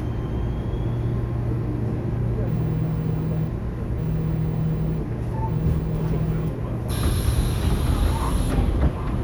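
No technical faults can be heard anywhere in this recording of sounds. Nothing in it needs to be flagged at any point.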